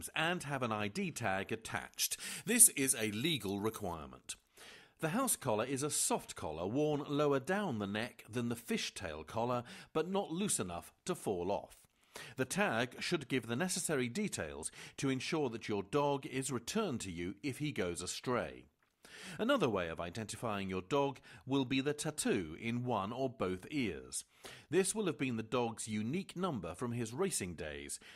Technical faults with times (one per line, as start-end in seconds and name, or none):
1.76-3.94 pre-emphasis left on